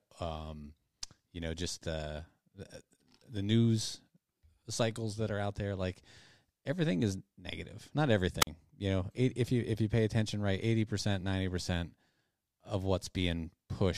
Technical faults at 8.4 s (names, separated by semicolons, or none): wireless microphone squelch dropout